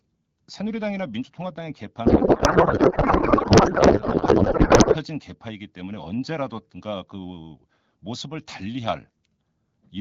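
A codec payload misread runs from 2.06 to 4.97 s. The frames are packed in AMR's octet-aligned format but decoded as if bandwidth-efficient, so every field after the header lands in the wrong bit positions. The decoder still produces output, but the speech in that stretch turns into garbled noise and warble that barely tracks the original. Outside that span the wideband AMR coding is clear, with light artefacts consistent with a 12.65 kbit/s mode.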